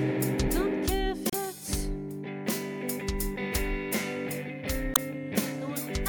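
At 1.30 s and again at 4.93 s, damaged data in a compressed stream produces a brief, roughly 45 ms glitch, heard as a chirp, squawk, click or short hole, as the decoder misreads corrupt frames and hunts for sync.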